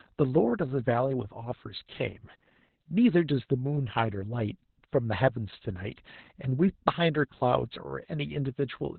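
Opus voice compression runs through the whole speech clip, from start to finish. The codec is working in its speech-oriented SILK mode at narrowband, so nothing above 4.2 kHz survives. The heavy damage, which fits a bitrate around 8 kbps, comes from coding the excitation very coarsely. The voice sounds muffled and dull, with a hoarse, slightly robotic edge, and sibilants lose their hiss because their energy sat above that cut-off.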